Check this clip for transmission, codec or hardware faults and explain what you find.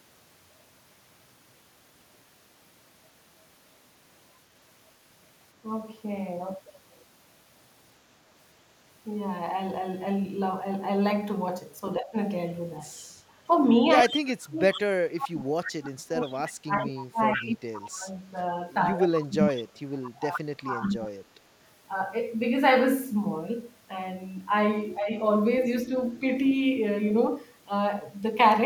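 Three faults tied to the call's echo cancellation are audible, all between about 12 and 25 s of the speech.

Speech suppressed in double talk occurs at 11.99–12.16 s (about 15 dB), 14.03–21.36 s (about five seconds affected, dips to about 30 dB) and 24.99–25.10 s (about 10 dB). The likely cause is the canceller mistaking overlapping talk for echo and attenuating everything. The voice sinks or breaks up, showing as sudden troughs in the waveform envelope and faded upper bands on a spectrogram.

Echo leak appears at 12.94–13.05, 14.08–14.81, 16.21–16.31 and 19.0–21.07 s, each a copy delayed 109 ms, from about 35 dB below the speech down to about 10 dB below in the longest stretches. The echo is likely residual loudspeaker pickup that escaped cancellation. A spectrogram shows repeated harmonic traces trailing the originals.

Background gated by the echo canceller occurs at 13.19–13.37 s, where the canceller clamped the microphone while the far end played. 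The room tone drops by about 10 dB for roughly 200 ms, leaving a notch in the waveform's noise floor and a brief dark gap across the spectrogram.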